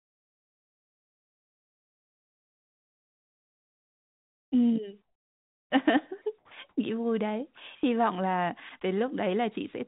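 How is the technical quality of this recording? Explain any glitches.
The recording has several call-transmission glitches, mostly around pauses, layered on narrowband audio with nothing above 4 kHz. That band limit fits a 64 kbps A-law telephone codec.

Comfort noise in place of the background appears from 0.0 to 4.52 s, from 5.97 to 6.77 s and from 7.55 to 7.83 s. The sender likely stopped transmitting whenever its voice detector judged the input to be silence, and the receiver filled the pause with synthetic noise built from a rough spectral outline. In the opening stretch the real room sound gives way to a flat, textureless hiss about 34 dB quieter. The later gaps sound similarly smooth and lifeless until the sound resumes.

A jitter buffer slow-down runs from 4.55 to 4.81 s. Just as sound returns, the receiver's buffer was short of reserve, so it stretched playback by repeating small fragments and added 43 ms in total. 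For that quarter second the audio plays at about 87% speed without any change in pitch. It sounds drawn out and sluggish.

An onset clipped by the voice detector occurs at 6.46 s. The detector was likely slow to register that sound had restarted, so the first 50 ms were never sent and comfort noise stood in for them. The sound therefore begins abruptly, with its soft lead-in missing, as though it were chopped on.

Sound dropped by the voice detector occurs at 7.55 to 7.57 s and at 8.69 to 8.71 s. The detector likely mistook a quiet passage for background, so transmission briefly stopped and about 20 ms of noise stood in each time, costing about 10 ms of real audio the first time and 20 ms the second. The result is a tiny dropout where the sound momentarily thins into hiss before returning.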